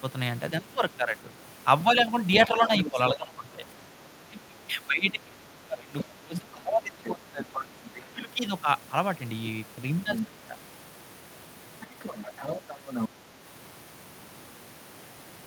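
A speech recording with two recurring problems. The first is speech suppressed in double talk: the talker's level sinks by roughly 15 dB at 0.62–1.17 s, 2.47–3.57 s and 8.13–8.3 s. A longer stretch from 4.25 to 7.57 s dips by about 20 dB for most of three seconds. The likely cause is an echo canceller that turned everything down while both ends spoke at once. Here the voice dips, loses its high end or cuts out in pieces. The second problem is the other side's voice leaking through. A fainter second voice, roughly 10 to 15 dB below the talker, appears at 2.78–3.17 s, 7.54–8.02 s, 10.07–10.26 s and 11.81–13.09 s. This is likely loudspeaker playback the echo canceller failed to remove. It differs from room reverberation because it is a separate voice, not a smeared tail of the talker's own sound.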